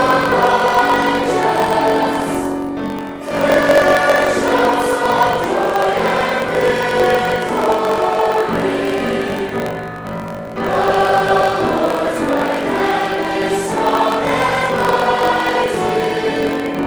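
Block size mismatch (truncated) runs throughout. One stage passes on longer blocks than the next reads, so each block's tail is dropped. This leaves a 46.9 Hz buzz, which fits a 1024-sample read block, and the sound plays 1.12 times fast at near-normal pitch.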